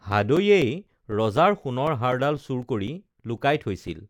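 Periodic USB or driver dropouts run from 0.12 s to 3.88 s, recurring every 0.25 s, about fifteen in all. At each one, something is blocking the USB bus or audio driver on a fixed schedule, so a few milliseconds of audio never arrive and are replaced by silence. The speech carries a steady ticking, four clicks per second, heard only where there is signal, each one a tiny gap.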